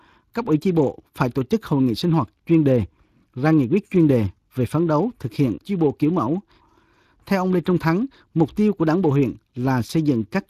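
Throughout, the speech sounds noisy and hoarse, plainly damaged by the Speex codec, whose CELP coding has too few bits for the excitation, consistent with roughly 22 kbps.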